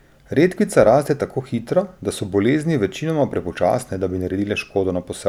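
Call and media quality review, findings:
No findings in this call and media quality review: the speech comes through without any audible fault.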